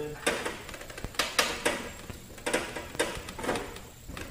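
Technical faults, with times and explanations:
1.05–1.07 s, 2.10–2.13 s and 2.95–3.20 s, loud pop: sharp pops jump well above the sound, roughly 10 to 15 dB, with a quick double at the last spot, while the audio carries on underneath. That's most likely a voltage spike from a plug, switch, static or driver glitch.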